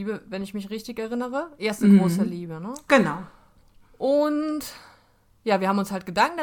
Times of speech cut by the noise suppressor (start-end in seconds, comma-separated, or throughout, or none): none